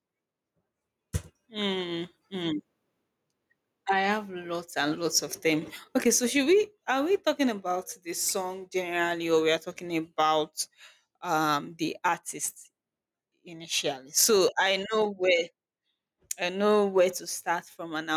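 Throughout the speech, the gain swings by around 15 dB, leaving the level squashed and breathing. This gain pumping is likely from input gain set far too high, with a fast limiter clamping down on peaks.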